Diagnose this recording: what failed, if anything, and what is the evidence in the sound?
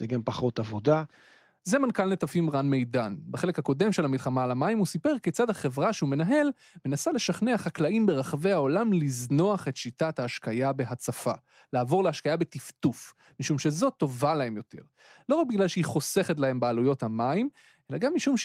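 Nothing in this speech recording points to a failure at any stage of the chain. No event in the sound ties a problem to the wiring, conversion, processing, transmission, storage or playback.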